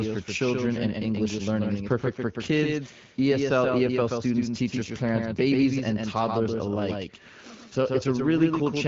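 From start to finish, every syllable of the speech is shadowed by a second copy arriving about 150 ms later and around 5 dB quieter, giving a slapback with no reverberant tail or room colour. This is a doubled audio track: the same signal mixed in twice, likely from a second capture path running slower than the first. The echo shares the wideband codec's band limit, with nothing above 7.3 kHz.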